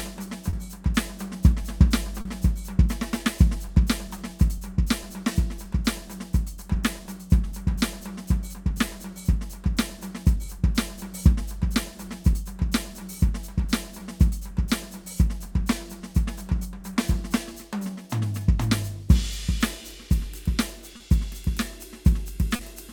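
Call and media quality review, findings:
Clock drift between sender and receiver, whole clip: sender clock roughly 2% slow relative to receiver. Jitter buffer steadily drains, forcing ongoing receiver-side compensation and occasional brief underruns across the music.

Repeated timing corrections, 0.27–20.92 s: playback running at 98% speed, receiver inserting short repeated pieces to stay in step. Around 0.4 s added overall.

Short stall from a late packet, 0.50–0.56 s, 2.21–2.28 s, 20.97–21.03 s, 22.56–22.62 s: jitter buffer ran empty, last sound stretched 30 ms (40 ms at 2.21 s) until the packet arrived. Nothing lost. Brief held sound, slight buzz or dip.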